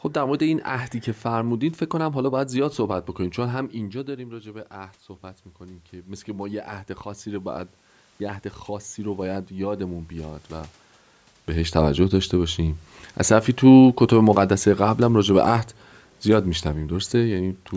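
From 5.59 to 7.57 s the speech and its room background swell together by about 4 dB, an automatic gain rising as the control answers an input that had dropped about 13 dB. From 13.19 to 15.64 s both sink together by about 3 dB, an automatic gain falling as the control pulls back a level it judged too loud or too noisy. The level shifts near 3.5 and 11 s come from the talker moving relative to the microphone.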